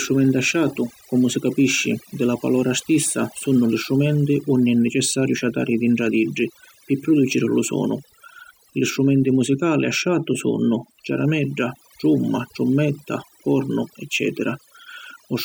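Overdone noise removal runs through the whole speech clip. An over-aggressive noise reducer has cut individual frequency bands whenever they sat near its noise estimate. This leaves a near-silent background with twinkling specks. On a spectrogram this shows as isolated speckles and ragged gaps in quieter harmonics.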